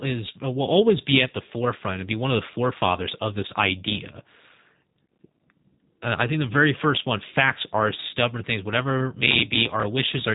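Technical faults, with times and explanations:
throughout, G.729 codec: speech rebuilt from a filter, pitch predictor and sparse pulses sounds rough and synthetic; the spectrogram shows a hard ceiling at 3.8 kHz, which fits an 8 kbit/s G.729A stream.
9.15–9.83 s, processor overload crackle: right after "are stubborn things whatever", dozens of missed buffers a millisecond or two long are skipped, leaving gritty tearing, with tiny gaps and hard-edged jumps in the waveform and vertical clicks on the spectrogram.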